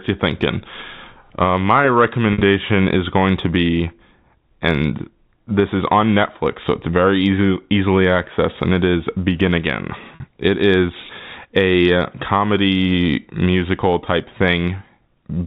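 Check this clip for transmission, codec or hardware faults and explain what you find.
Two brief dropouts in the speech are packet loss with pitch repetition. At 2.33 to 2.41 s, just before "is going to be", and at 10.15 to 10.20 s, the sound holds a slightly buzzy, frozen tone. The receiver replayed the last pitch period to cover about 70 ms and 50 ms of missing audio, fading it out. The G.711 telephone coding's 4 kHz band limit can be heard throughout.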